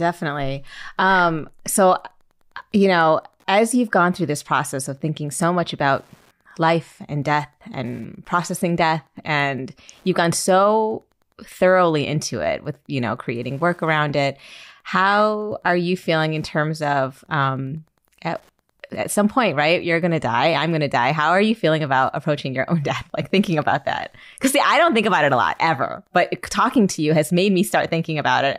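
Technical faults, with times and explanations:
Throughout: Wi-Fi interference. There's a faint, steady ticking under the speech, roughly ten ticks a second, sitting somewhere around 45 dB below the signal, so you mostly catch it in the pauses. That rhythm is the giveaway: a nearby Wi-Fi radio sends a beacon every 102.4 ms, and the audio circuitry picks up each burst and rectifies it, turning the radio pulse into an audible click that repeats like clockwork.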